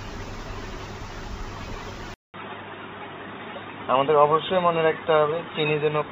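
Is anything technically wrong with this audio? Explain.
Yes. At 2.14 s the sound drops out for about 200 ms, then returns duller and boxier through to the end, with nothing above 3.8 kHz and a faint new noise floor well below the signal, while the loudness stays about the same. This is likely the input switched to a poorer device, such as a headset call profile, whose narrower band cuts the top. On a spectrogram the upper band vanishes abruptly after a brief blank gap, and the waveform shows a flat silent stretch.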